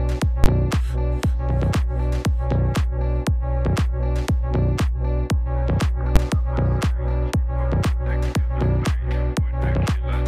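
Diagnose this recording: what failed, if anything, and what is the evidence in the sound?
Invalid numbers at full scale, heard as two sharp bangs at about 0.44 s and 6.16 s. The fault sits in the digital processing stage, where a floating-point calculation produced infinite or invalid values. When they were converted to fixed-point output, each was clamped to the largest positive or negative sample value, pinning the waveform flat at one extreme far beyond the audio's peaks for roughly 20 ms and then 10 ms. Both blocks are that brief, so each is heard as one loud bang rather than a pop at either end with silence between.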